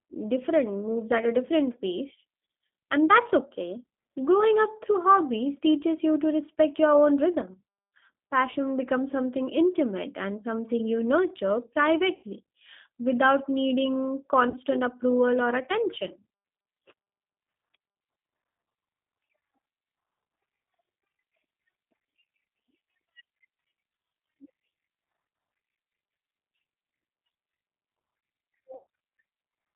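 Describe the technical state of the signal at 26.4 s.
At 26.4 s the speech is in the same state as for the whole clip: it has passed through a G.729 codec, and the sound fits the G.729A variant at 8 kbit/s. The band runs only from about 150 Hz to 3.6 kHz, and the codec damage is plainly audible. The coder rebuilds each 10 ms frame from a vocal-tract filter, a pitch predictor and a few sparse pulses, which gives the speech a rough, slightly synthetic buzz. A simple telephone band-pass filter would sound narrow but smooth, without that texture.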